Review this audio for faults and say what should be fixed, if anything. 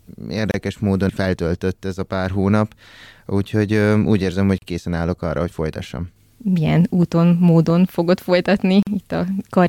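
Gap at a join of encoded pieces: the speech drops out three times, at 0.51 to 0.54 s (about 29 ms, just before "módon feltöltött ez a"), at 4.58 to 4.62 s (38 ms, between "úgyhogy úgy érzem hogy" and "készen állok arra hogy"), and at 8.83 to 8.87 s (42 ms). Each is where separately encoded segments were joined with their encoder start delay and final-frame padding left in. On a waveform each shows as a short flat line with slightly softened edges. On a spectrogram it is a thin vertical blank band across all frequencies, and the speech resumes where it stopped. To prevent it, encode the audio as one continuous stream, or trim each segment's priming delay and padding before joining.

Train of clicks: from 6.68 to 7.71 s, right after "állok arra hogy folytassam", about five similar clicks land at an uneven pace of roughly 3.9 per second. They peak a little above the speech level. The likely cause is interference from nearby equipment or a faulty connection or power supply. 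On a waveform they are narrow spikes standing out from the speech envelope, and on a spectrogram they are thin broadband vertical lines at irregular spacing. To prevent it, reroute or shield the cabling away from interfering equipment and check the interface's connection and driver.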